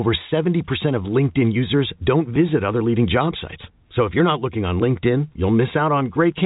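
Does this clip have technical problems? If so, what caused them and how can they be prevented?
No, the speech carries the band limit of G.711 telephone coding, with nothing above 3.8 kHz, which is that format working as designed rather than a defect.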